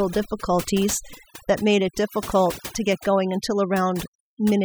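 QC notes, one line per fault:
Throughout: overdone noise removal. Aggressive band gating leaves near-silent gaps with twinkling specks; the spectrogram shows patchy, holed bands between harmonics.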